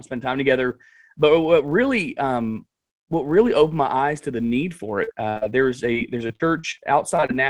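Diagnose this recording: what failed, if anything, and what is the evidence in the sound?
Filter restarted on every block, throughout the clip. This fault sits in the processing stage. A steady 200 Hz buzz rides under the speech and rises and falls with its level. That rate points to a filter being reset every 5 ms. Each block starts from zero state instead of carrying over the previous block's memory, so every boundary produces a small transient. Heard in sequence, those transients fuse into the buzz.

Short concealed packet loss, at 5.03–5.09 s, 5.38–5.43 s, 7.16–7.31 s, 7.20–7.24 s and 7.26–7.31 s. This is a network fault that the receiver's concealment partly hides. Each hole is 20 to 40 ms long and is patched with a continuation of the preceding sound, then blended back. The result is a brief smear or wobble. The 7.16 s event also stretches the timeline by a few milliseconds, which shows the jitter buffer adjusting.

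Burst of packet loss, at 5.29–5.38 s. About 60 ms of audio went missing in a row. The decoder filled it with roughly 65 ms of synthesised continuation that fades as the gap goes on, heard as a held buzz or fading hiss. Playback then resumes further along, with that span of speech gone. A further short concealed loss follows directly after.

Repeated packet loss (robotic sound), at 5.93–6.80 s. Over this stretch six separate gaps cut out about 160 ms in total, the longest about 42 ms. Concealment covers roughly a sixth of the span. The holes arrive so close together that the patched continuations chain into a choppy texture. The codec band limit near 12 kHz stays steady through all of it, which places the failure in packet delivery rather than in coding.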